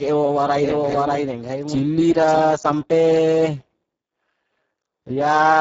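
Right from the start the speech carries heavy Speex codec damage. The excitation is starved of bits, so voices come out hoarse, noisy and edging toward robotic, and the sound fits a very low setting of around 6 kbps. The top end stops at 7.7 kHz, and what sits above 4 kHz is just a shaped hiss rather than real detail.

From 0.59 s to 2.39 s there's a doubled audio track. A second full-band copy of the speech trails the original by roughly 0.7 s at about the same loudness. It has no reverb tail or room colour, and it cuts in and out abruptly at those edges, which likely means the same signal got captured twice through a slower path.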